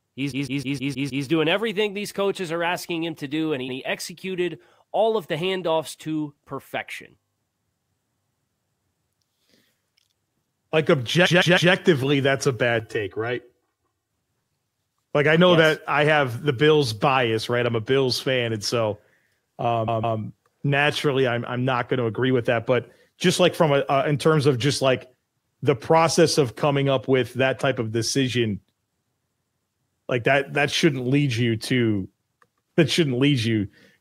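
A block of compressed frames was delivered more than once, so the decoder replays the same 157 ms slice, which holds six frames. These repeated frames are heard from 0.30 to 1.24 s, stuttering six extra times before "doing everything these coaches" and adding about 0.94 s, and from 11.25 to 11.72 s, three extra times before "that's a". From 12.80 to 14.10 s, one channel runs about 3 ms late and the two are summed to mono. This channel delay (comb filtering) cancels shared content at evenly spaced notches starting near 200 Hz, making the sound hollow and phasey. A final stutter of repeated frames, two extra plays of the same block, runs from 19.87 to 20.18 s just before "naturally I'm I'm not" and lengthens the audio by about 0.31 s.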